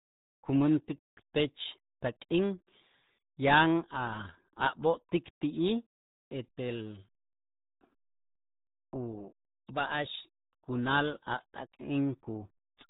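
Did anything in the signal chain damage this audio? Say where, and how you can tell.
Yes, at the codec stage, for the whole clip: the speech has been through the RealAudio 14.4 codec, RealAudio 1, a dial-up era speech coder. The band stops dead at about 3.8 kHz, and the heavy, gargly smearing of the speech throughout is consistent with an 8 kbit/s rate. At that rate the coder keeps only a coarse model of the speech spectrum and discards the upper band, leaving every syllable muffled and gargly.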